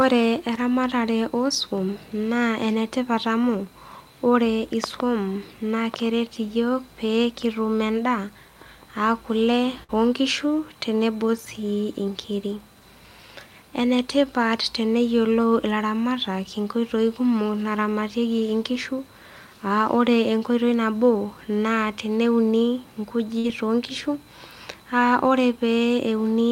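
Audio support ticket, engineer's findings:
Burst of packet loss at 9.83–9.91 s and 23.39–23.46 s. Network/jitter-buffer concealment: about 50 ms of last sound extended and faded, about 60 ms of speech skipped. Spectrogram shows the smeared last sound decaying into a short gap, then an abrupt onset.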